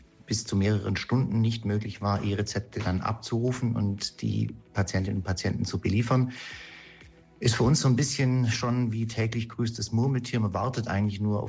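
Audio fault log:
No faults are audible anywhere in this clip.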